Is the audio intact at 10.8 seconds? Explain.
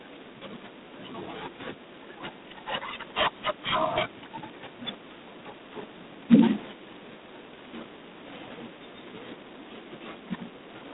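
No. G.726 ADPCM coding runs through the whole clip, including 10.8 s. The speech sounds like heavily coded telephone audio, which fits 16 kbit/s, coded as small differences from a running prediction. It keeps only 200 Hz to 3.7 kHz, with nothing above 3.8 kHz, and a harsh rasping hiss rises and falls with the speech level. That level-following hiss sets it apart from the watery, metallic artefacts of a perceptual codec.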